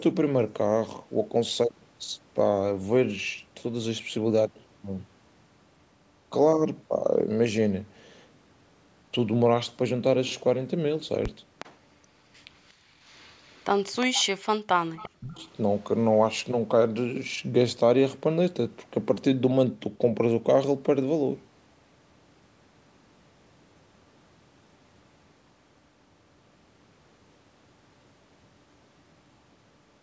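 An echo canceller on a loudspeaker-phone side of this speech call is likely failing to remove all of the far-end sound its microphone picks up, so an echo leak returns a delayed copy of the voice, arriving about 361 ms late. The scraps appear at 11.59–11.77 s, 12.67–12.73 s, 13.01–13.64 s, 14.01–14.25 s, 14.96–15.07 s and 15.38–15.51 s, sitting roughly 15 to 40 dB below the direct speech, fragmentary rather than a continuous second voice. The same canceller also clamps the microphone hard while the loudspeaker is active, and this background gated by the echo canceller shows as a sudden hole in the room sound from 12.73 to 12.96 s. It reaches a drop of about 34 dB and lasts around 0.2 s before the ambience returns. At 15.05–15.42 s the speech is suppressed in double talk, likely where both sides speak together and the canceller cannot tell the local talker from the loudspeaker echo, so it turns both down. 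The voice dips by roughly 40 dB across about 0.4 s, overlapping the echo bursts on either side. The band stops at 8 kHz, consistent with ordinary call microphone processing.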